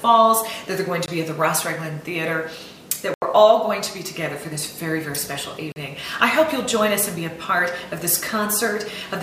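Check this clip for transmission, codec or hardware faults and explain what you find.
Three blocks of digital silence: 1.06–1.08 s (20 ms), 3.14–3.22 s (80 ms) and 5.72–5.76 s (40 ms). Samples drop abruptly to silence, as when the output buffer isn't filled in time. Unlike concealed packet loss, the gaps are true silence with nothing smeared or repeated.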